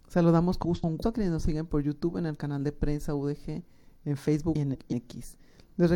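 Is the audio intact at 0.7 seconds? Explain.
No. From 0.65 to 1.03 s the audio has frames out of order: two adjacent blocks of about 0.19 s each, consistent with runs of four codec frames, were decoded in swapped sequence. The passage plays with its halves exchanged, producing a garbled flutter, though no time is lost.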